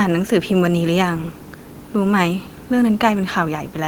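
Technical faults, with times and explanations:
No technical faults can be heard anywhere in this speech recording. Nothing in it calls for a time or an explanation.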